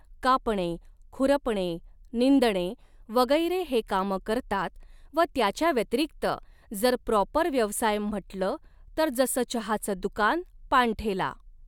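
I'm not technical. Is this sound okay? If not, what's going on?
Yes, there's nothing wrong with this recording.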